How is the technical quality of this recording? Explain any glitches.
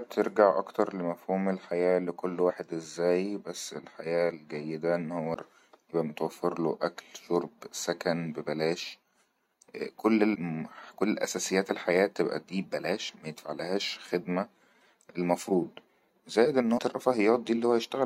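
The recording has five short glitches caused by damaged data in a compressed stream, at 2.49–2.51 s (after "أكتر لمفهوم الحياة لكل"), 5.34 s (after "بس الحياة الجيدة أنه"), 10.34–10.36 s, 13.08–13.10 s and 16.77–16.79 s. At each point, corrupted bytes made the decoder misread frames and lose sync while it hunted for the next valid frame header. Each lasts only about 20 ms and is heard as a brief chirp or blip interrupting the speech.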